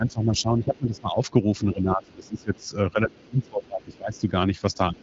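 From the start to 1.18 s, the talker's speech is suppressed in double talk. The level dips by roughly 15 dB. The likely cause is an echo canceller that cannot tell the talker from loudspeaker echo when both sides speak at once, so it turns both down. From 0.07 to 1.0 s, the other side's voice leaks through underneath, about 30 dB below the talker. It is a faint second voice. This is likely residual echo that the canceller failed to remove.

From 1.73 to 4.27 s, double-talk suppression returns and is heavier. The speech drops by as much as about 20 dB, affecting about two seconds in total. Within that stretch, the other side leaks through again at 2.04 to 2.63 s, 3.23 to 3.47 s and 3.92 to 4.21 s. Each burst is short, roughly 35 dB down.

From 4.9 s to the end, a brief final suppression pulls the voice down by about 25 dB. The AMR wideband (HD Voice) codec at 12.65 kbit/s is running underneath, with a light codec colouring and nothing above about 7.7 kHz.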